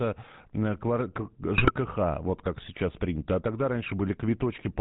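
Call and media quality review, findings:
GSM full-rate codec, whole clip: speech coded at a rate that fits 13 kbps GSM full rate. Vocal-tract model driven by sparse regular pulses, nothing passed above 4 kHz. Plainly audible buzzy, gravelly roughness and a dull, band-limited top end.

GSM bit errors, 1.56 to 1.71 s: corrupted filter, pitch and gain parameters reaching the decoder, which fits roughly six damaged 20 ms frames and a bit error rate near 3 percent. Speech breaks into squawks, pops and gargling, with level jumps.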